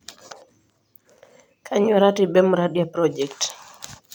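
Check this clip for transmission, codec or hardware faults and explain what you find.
No faults found.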